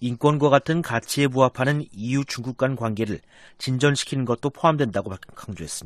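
Nothing in the audio stands out as a technical fault at any point.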